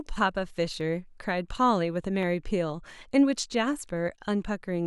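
Likely dropped samples, a tiny fraction of a millisecond each, make the waveform jump, giving sharp single clicks in the speech at 0.81, 2.23 and 3.84 s.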